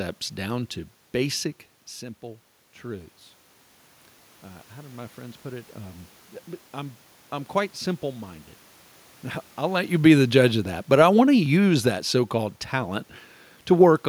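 From 9.68 s to 12.44 s there's an automatic gain falling fault: the gain control decides the input is too loud, or its background noise too strong, and pulls its gain down step by step, about 5 dB in all. You hear the speech gradually sink, with the room noise sinking right along with it, which is how you can tell it's the gain stage and not the talker. The level shifts from the talker moving, around one and a half seconds and again just before the drop, are ordinary and not part of the fault.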